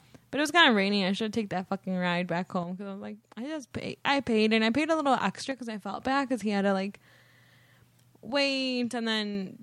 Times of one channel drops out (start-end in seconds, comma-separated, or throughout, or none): 2.63-3.71, 5.51-6.00, 8.30-9.35